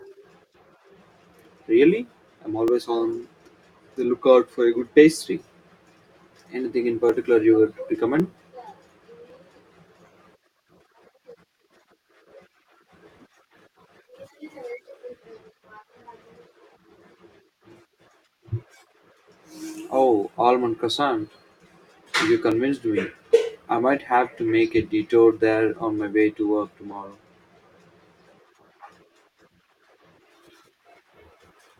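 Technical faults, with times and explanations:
0.48 to 31.3 s, clock drift buffer slips: a click recurs every 1.1 s beneath the speech, about thirty in all. Two devices likely run on separate clocks about 700 ppm apart, so the buffer between them periodically drops or repeats a few dozen samples.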